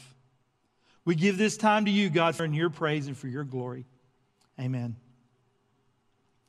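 At 2.39 s the speech is broken by damaged data in a compressed stream. Part of the encoded data there was corrupt. The decoder misread those frames, lost sync and jumped to the next valid frame header. It is heard as a brief chirp or blip.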